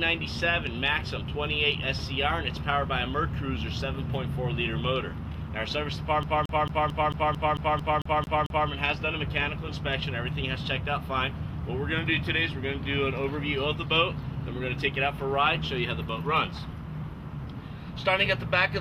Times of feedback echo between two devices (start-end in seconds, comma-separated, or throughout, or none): none